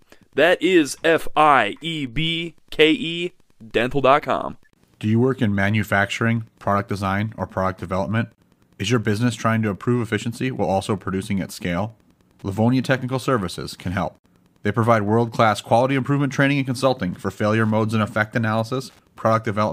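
Wi-Fi interference runs through the whole speech clip, from start to finish. A Wi-Fi radio sitting close to the audio circuitry is broadcasting its beacon every 102.4 ms, and the circuit rectifies those radio bursts into the audio band. The result is a steady, regular ticking just under ten times a second, lying roughly 40 dB below the speech. It is faint beneath the speech itself but persistent in the gaps between phrases.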